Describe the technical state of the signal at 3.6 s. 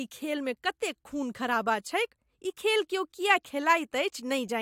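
The audio is intact at 3.6 s, with no fault present at that moment.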